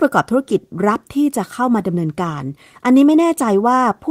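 No technical faults can be heard anywhere in this speech recording. There is nothing to place in time or describe.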